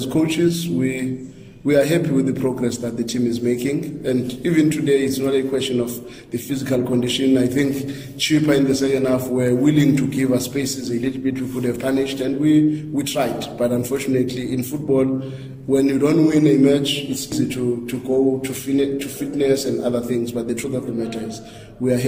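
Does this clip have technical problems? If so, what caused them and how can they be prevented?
Yes: at 17.32 s the audio jumps ahead, losing about a tenth of a second, likely a dropped buffer (overrun). Bigger buffers or less competing CPU load should prevent it.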